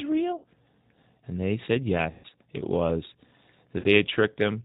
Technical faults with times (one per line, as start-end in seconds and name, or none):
0.00-4.65 G.729 codec
0.38-0.44 VoIP packet loss concealed by the speech codec
2.11-2.28 VoIP packet loss concealed by the speech codec
3.79-3.85 VoIP packet loss concealed by the speech codec